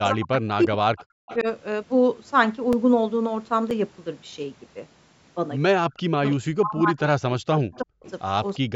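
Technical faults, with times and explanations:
0.0–1.47 s, speech suppressed in double talk: while the far end is also talking, the level drops in pieces by up to about 40 dB, totalling around a second. This is likely the echo canceller failing to separate the near talker from loudspeaker echo and attenuating both.
0.99–1.37 s, echo leak: a faint delayed copy of the sound, arriving 338 ms late and around 20 dB below the direct signal. It is likely residual loudspeaker pickup that the far end's echo canceller did not fully remove and sent back.
2.73 s and 3.70 s, block of digital silence: two abrupt dropouts, 2.9 ms and 5.8 ms long, fitting 128- and 256-sample blocks. There is no fade at either edge, so each is heard as a sharp tick rather than a gap.
5.89–8.03 s, speech suppressed in double talk: during overlapping talk the level again dips and breaks up by up to about 40 dB, about 1.5 s in total. 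This is likely the echo canceller clamping down when it cannot tell the two talkers apart.
6.31–6.36 s, echo leak: a brief scrap of the sound returns 338 ms late, roughly 30 dB down. It is likely a short burst of uncancelled loudspeaker echo.
7.75–8.11 s, echo leak: a longer delayed copy at the same 338 ms lag, about 25 dB below the direct signal. It is likely residual echo slipping past the canceller.
8.59–8.75 s, speech suppressed in double talk: a short dip of up to about 40 dB, about 150 ms long, at the very end. This is likely the same double-talk attenuation.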